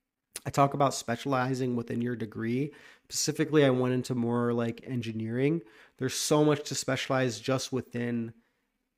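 No technical faults can be heard in this speech recording.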